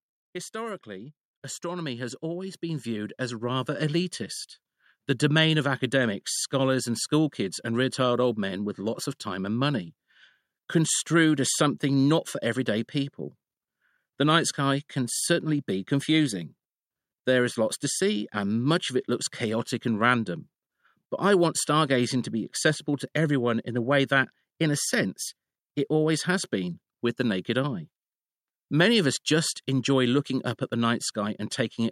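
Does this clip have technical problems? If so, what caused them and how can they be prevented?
Yes: automatic gain rising from 0.52 to 3.99 s, where the AGC lifts everything, speech and background, by about 13 dB. Fix the input gain and disable AGC.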